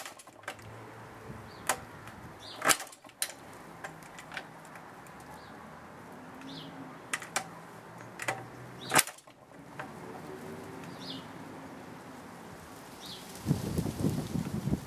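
No technical faults are audible anywhere in the clip.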